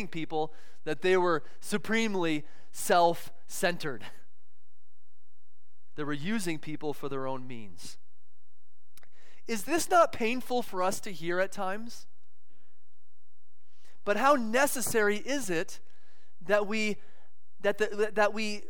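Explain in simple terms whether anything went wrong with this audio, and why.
DC offset runs through the whole clip, from start to finish. The entire waveform sits slightly shifted away from its zero line by a constant amount. You can't hear it, but it wastes some loudness room before clipping and leaves steady, silent energy at the very lowest frequency.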